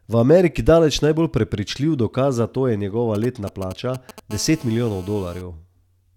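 From 3.15 to 4.20 s, right after "dokaz za to je", GSM signalling bursts appear: a nearby 2G phone exchanging control traffic, its radio pulses rectified by the audio circuitry into a galloping run of ticks and brief 217 Hz buzzes, roughly 15 dB under the speech. From 4.31 to 5.42 s comes steady GSM phone buzz, the phone now in a call and transmitting in bursts 217 times a second. Rectification turns it into a hard, raspy tone rich in harmonics, about 24 dB below the speech and unrelated to it.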